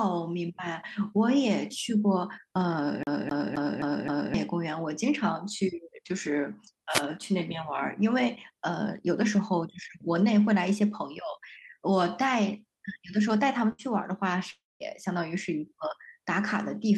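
CD stuck on one turn, from 3.03 to 4.34 s in this speech recording: the same 0.26 s slice of audio plays five times in a row, each pass ending in a brief mute as the pickup jumps back. This produces the quick, perfectly regular stutter of a skipping disc, where a scratch throws the laser back one track at the same point on every rotation. A wireless microphone noise hit follows at 6.89 to 7.03 s, a short swish of static lasting about 0.14 s. An analogue FM radio link fades when reflected signals cancel one another, so the receiver's own noise rises and briefly sits over the sound before the carrier recovers. A burst of packet loss at 13.72 to 13.82 s leaves roughly 60 ms of audio that never arrived. The receiver covers the hole by extending the last sound for about 63 ms and letting it fade, which gives a short held buzz or hiss. Playback then picks up again slightly further along, and the material in between is gone. 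A long network dropout at 14.51 to 14.83 s sounds like a longer version of the same thing. The last sound is stretched out and decays for about 0.1 s, then gives way to about 0.2 s of silence, and when the audio returns roughly 0.3 s of it is missing, which is likely the result of the stream stopping entirely for that stretch. Underneath all of this the audio carries the coding texture of a call codec, with the top end cut at 12 kHz.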